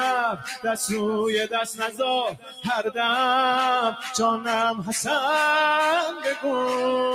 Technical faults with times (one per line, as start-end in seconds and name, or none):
0.00-7.14 noise suppressor applied to music or sounds
0.32-0.67 sound cut by the noise suppressor
1.71-2.00 sound cut by the noise suppressor
2.31-2.66 sound cut by the noise suppressor
3.92-4.16 sound cut by the noise suppressor
6.12-6.44 sound cut by the noise suppressor